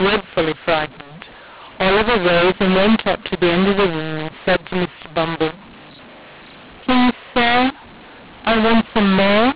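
Telephone speech with a mu-law and A-law mix-up running through the whole clip. The audio was coded as A-law but decoded as mu-law. Levels come out scrambled, so the speech sounds harsh and distorted. Pauses fill with noise. The narrow band fits G.711 telephone coding.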